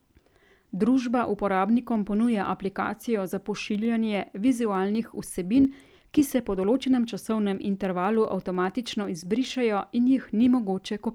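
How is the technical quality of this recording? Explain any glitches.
The recording has one clear fault: periodic USB or driver dropouts from 1.75 s to 9.54 s. Something stalls the audio path about every 0.1 s, and each time a sliver of a fraction of a millisecond is skipped rather than filled with silence. The waveform jumps at each splice, so the speech carries a steady tick about ten times a second, heard only while sound is present and gone in the pauses.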